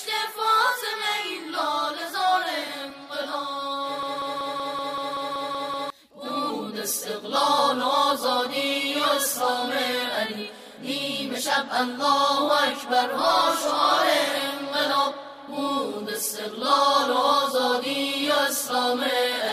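From 4.03 s to 5.90 s the audio stutters in a broken-record loop, one fragment of about 190 ms repeating exactly ten times back to back. The likely cause is a stalled player, encoder or stream resending its last buffered piece, so the intended audio there is lost.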